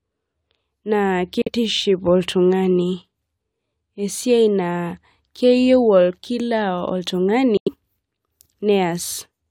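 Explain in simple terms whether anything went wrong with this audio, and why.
Two short gaps break up this speech, most likely Bluetooth dropouts: some audio packets didn't reach the headphones in time and were discarded. With nothing to play, the sound cuts to silence, from 1.42 to 1.49 s and again from 7.57 to 7.69 s, the second gap noticeably longer. Each time the speech jumps back in slightly further along, as though it kept playing during the silence, so a small piece is simply skipped.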